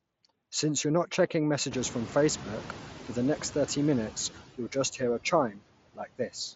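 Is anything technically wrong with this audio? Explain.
Yes, this speech clip has several technical faults.

Noise suppressor artifacts run throughout. The suppressor cuts bands it judges to be steady noise, here by about 15 dB, frame by frame. The background dips between phrases and swells under speech. On a spectrogram the noise floor pumps and leaves patchy, flickering residue.

The noise suppressor is catching up from 1.71 to 3.72 s, after "you're not checking" and before "minutes you'll just hear". The room noise jumps by about 22 dB near 1.5 s. The suppressor's noise estimate lags, taking about 2 seconds to adapt and cutting only about 6 dB at first. The spectrogram shows a bright noise band fading gradually.

Concealed Bluetooth headset packet loss occurs at 4.93 s, between "minutes you'll just" and "hear a". A single lost frame of about 7.5 ms was filled by repeating a matching stretch of recent waveform. 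It is nearly inaudible. The waveform shows a short repeated cycle with a tiny discontinuity at the rejoin.

Speech cut by the noise suppressor occurs from 5.51 to 5.63 s, right after "you'll just hear a". The suppressor mistook part of the speech for noise and pulled it down by up to about 16 dB over roughly a tenth of a second. The sound there seems swallowed. The waveform's envelope and the spectrogram's harmonics both thin abruptly.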